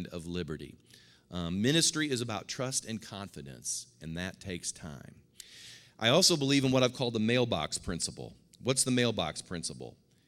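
No technical faults detected.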